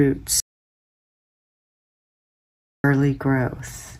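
At 0.40 s the sound cuts out abruptly and stays gone until 2.84 s, an audio dropout to silence lasting about 2.44 s. It's silent with no room tone, so the input was likely lost while recording carried on, and whatever happened then is gone.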